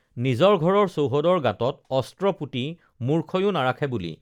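Speech recording with no audible technical faults.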